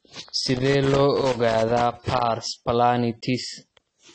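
Throughout, the speech sounds dull and fizzy, and a spectrogram shows nothing above 8.3 kHz, likely from AAC compression at a low bitrate near 24 kbps. From 0.42 to 2.22 s there is loose connector crackle: an intermittent contact chops the signal into irregular scratchy bursts, visible as jagged spikes in the waveform.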